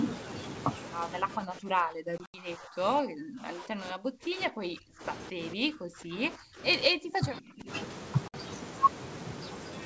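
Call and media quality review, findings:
Speech suppressed in double talk at 1.27–2.81 s, 3.01–5.04 s, 5.3–6.62 s and 6.89–7.69 s. Speech ducks by about 30–40 dB, likely the echo canceller attenuating near-end speech during far-end activity.

Packet loss on an ADPCM call at 2.18–2.36 s (100 ms lost, longest run 80 ms) and 8.28–8.35 s (60 ms). Abrupt silent holes, which fits 20 ms packets. Resumed G.722 speech is briefly off as the decoder's predictor and step size re-converge.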